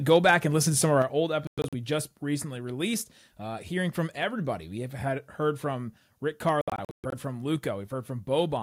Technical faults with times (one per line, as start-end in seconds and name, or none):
0.11-0.34 microphone overload
1.02 microphone volume stepped down
1.47-1.74 Bluetooth dropout
6.61-7.14 Bluetooth dropout